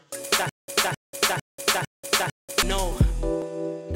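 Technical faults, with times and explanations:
0.49–2.63 s, stutter with silent gaps: the same fragment of roughly 263 ms plays, cuts to digital silence for about 188 ms, then plays again, five times at a steady 451 ms cycle. The even pacing and true silence between bursts point to a stalled player or stream that likely kept re-issuing its last buffered fragment on each retry before running dry. Whatever audio belonged to that two-second stretch never arrives and is lost.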